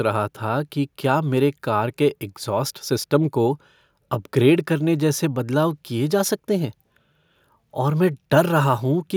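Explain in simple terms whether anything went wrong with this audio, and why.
Nothing went wrong here.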